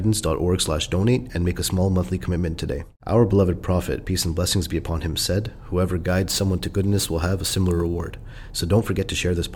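From 5.98 to 8.23 s the speech picks up a gritty, inharmonic fizz riding on louder and brighter sounds, roughly 20 dB below the speech. This is crude rate conversion: samples repeated without filtering, which fits a 44.1 kHz to 48 kHz change.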